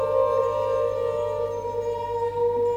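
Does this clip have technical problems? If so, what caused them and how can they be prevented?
No, no technical problems can be heard here.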